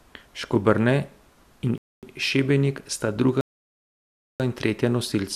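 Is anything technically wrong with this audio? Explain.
Yes, there are two timing faults, both of which insert silence into the speech without losing any of it.

From 1.78 s to 2.03 s there is a gap between chunks: a 250 ms hole. The audio appears to have been delivered in 2.0 s chunks, and at this join the next chunk began late, probably because of codec padding or a player that is slow to start each segment. The speech stops dead and picks up cleanly after the hole.

From 3.41 s to 4.40 s there is a rebuffering stall. The player exhausted its downloaded audio, fell silent, and waited for more data before carrying on. Playback resumes exactly where it halted, so nothing is skipped, but the stall adds about 0.74 s to the running time. It sounds like a sudden mid-stream freeze into silence followed by an unchanged continuation.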